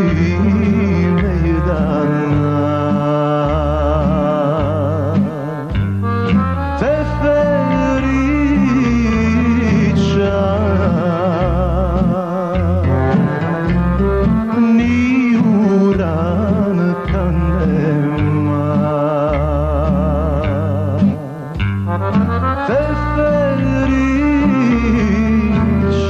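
Nothing goes wrong anywhere in the recording, so there's really nothing to flag here.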